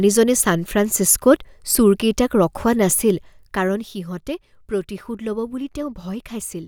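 From 2.88 to 4.12 s there's zipper noise: the speech drops by roughly 10 dB in about thirty unsmoothed steps a second, so you hear a ticking buzz riding on it.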